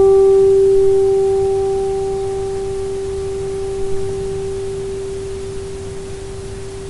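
Nothing goes wrong anywhere in this recording of sounds, so there's no technical fault to point to.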